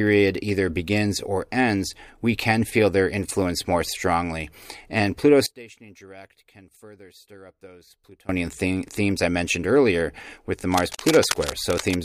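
From 5.46 to 8.29 s the speech drops by about 24 dB and turns faint, the likely result of one channel inverted, so the centred voice cancels when summed to mono.

From 10.72 to 11.95 s, just after "mentioned earlier with the", dense uneven scratching rides over the speech at roughly 10 dB below it, likely cable scratch noise from a worn, moving contact.

From 10.95 to 10.99 s a 36.8 ms gap with smeared edges cuts in before the sound resumes. This is a gap at a join of encoded pieces, where each piece's encoder delay and padding were left in.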